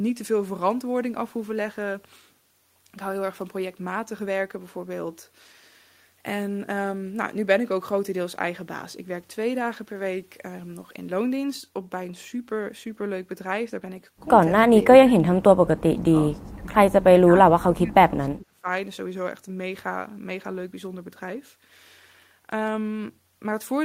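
Between 14.69 and 18.67 s the speech is repeatedly pushed down, in stretches at 14.69–15.37, 15.54–16.12, 16.31–16.67 and 17.22–18.67 s. The deepest dip is about 30 dB in the first and around 20–25 dB in the rest, and the last holds for well over a second. This is speech suppressed in double talk, likely an echo canceller turning down its own talker while the far side also spoke.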